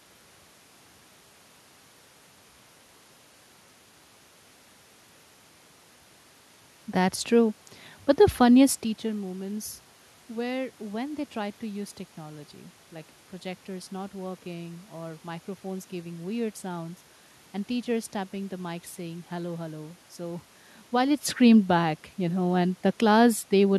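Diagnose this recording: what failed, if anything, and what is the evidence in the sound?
Nothing failed in any stage of the chain; the background noise is the room's own noise, and the level changes around 8 and a half seconds and again near 21 s come from the talker moving relative to the microphone.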